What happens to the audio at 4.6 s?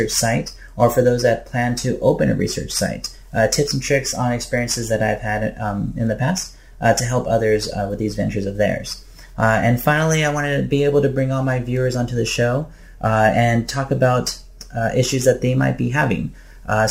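A crude rate conversion runs through the whole clip, including 4.6 s. It sounds like a 44.1 kHz to 48 kHz change done by repeating the nearest sample without filtering, leaving a gritty, inharmonic fizz roughly 25 dB below the sound that tracks loud, bright passages.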